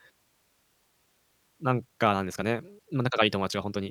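Speech clip with a time-stretched section from 1.69 s to the end: delivery suddenly runs about 1.5 times faster at unchanged pitch, sounding rushed, likely from length-fitting software dropping short segments.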